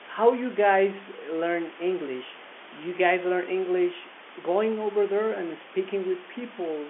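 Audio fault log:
No fault to log.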